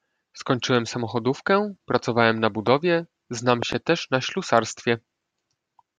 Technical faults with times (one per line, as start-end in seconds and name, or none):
2.67-2.69 loud pop
3.62-3.75 loud pop